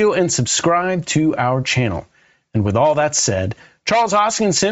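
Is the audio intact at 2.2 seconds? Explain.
No. At 2.2 seconds the speech carries Bluetooth LC3 compression, which runs through the whole clip. The damage is plainly audible. The upper spectrum sounds thinned and replaced by noise, giving the voice a breathy, grainy edge. The likely cause is an LE Audio link coding in short 7.5 ms transform frames. At a low rate, the codec drops high-band detail and fills the gap with noise. The sound points to a rate near 32 kbps.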